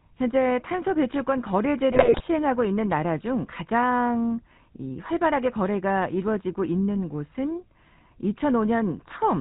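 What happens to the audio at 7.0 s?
At 7.0 s the speech is passing through the GSM full-rate codec, as it does for the whole clip. The codec models the vocal tract as a filter. It drives that filter with evenly spaced pulses and keeps only one excitation sample in three. Nothing above 4 kHz survives. The damage is plainly audible as a buzzy, gravelly roughness over a dull, band-limited sound. That character fits a 13 kbps GSM stream.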